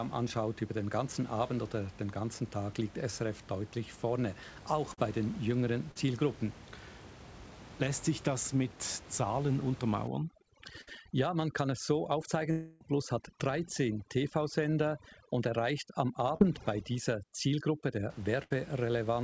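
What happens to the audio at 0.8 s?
Nothing goes wrong at 0.8 s; the speech runs on intact there, with only the steady room noise in the background and the call path's normal band limit at 8 kHz.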